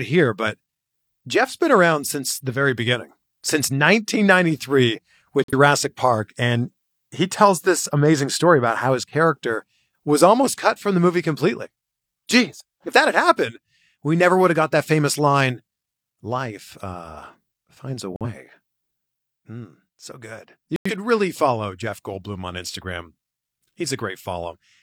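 Corrupt frames muted at 5.44–5.53, 18.16–18.26 and 20.76–20.91 s: the decoder rejected damaged compressed frames and abrupt silent holes replaced them. Unlike a skip, the speech timing stays intact.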